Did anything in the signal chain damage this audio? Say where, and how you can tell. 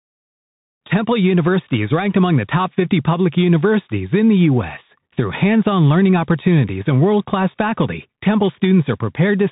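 Yes, at the codec: it's the Bluetooth CVSD headset codec, across the whole speech clip. Nothing gets above 3.8 kHz, the s sounds come out scratchy, and there's granular hiss underneath. The one-bit delta coder's step can't keep up with loud, bright sounds, which fits a 64 kbps CVSD link.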